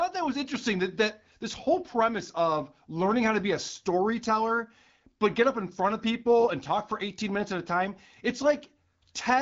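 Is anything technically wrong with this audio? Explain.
No, nothing is technically wrong: the speech is carried by the AMR wideband (HD Voice) codec at 12.65 kbit/s with light coding damage and the expected band limit, with nothing above about 7.5 kHz.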